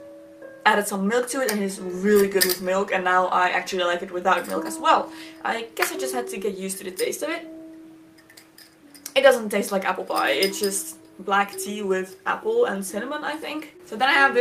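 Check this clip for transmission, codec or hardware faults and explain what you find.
Nothing to report: no transmission, codec or hardware fault turns up anywhere in the clip.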